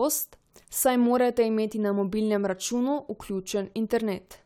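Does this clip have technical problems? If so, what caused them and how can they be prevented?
No, nothing stood out as a technical problem on listening to this speech clip, so there is nothing here that needs preventing.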